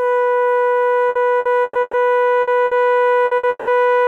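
Repeated packet loss (robotic sound) runs from 1.09 to 1.96 s: four gaps, the longest 120 ms, are each patched by extending the preceding music, leaving the passage choppy, with about 360 ms missing.

A burst of packet loss occurs at 2.41–2.50, 2.65–2.74, 3.25–3.34 and 3.37–3.46 s. Each time, roughly 60 ms of held, fading sound replaces the missing audio before the music resumes further on.

From 3.49 to 3.70 s the music is stretched into a fading sound for about 180 ms, then goes briefly silent before returning with a section absent, likely a long network dropout.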